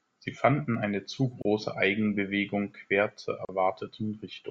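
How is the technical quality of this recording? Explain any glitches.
The speech is broken by two short dropouts. Both are gaps at a join of encoded pieces. One falls at 1.42 to 1.45 s, just after "fanden eine zu", lasting 29.5 ms. The other falls at 3.45 to 3.49 s, after "quer zur", lasting 37.6 ms. They recur every 2.0 s, so the audio was encoded in separate pieces and joined untrimmed. Each piece's encoder delay and last-frame padding remain as silence. You hear a sudden hole with softened edges. Then the speech resumes where it stopped.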